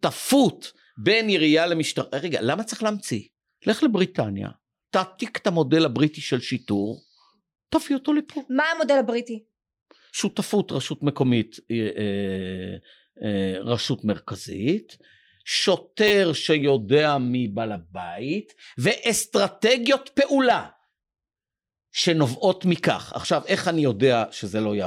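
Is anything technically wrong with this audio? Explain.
Yes. The speech has two repeated buffer faults, at 7.07 s and from 16.08 to 16.11 s. Each time, new audio reached the device too late. The device played its last block again instead. The repeated piece is about 10 ms long, which fits a 10 ms buffer. At 7.07 s it plays once more, giving a single click. At 16.08 s it repeats three more times, giving a brief buzz. Hard joins separate the copies. No speech seems to be lost.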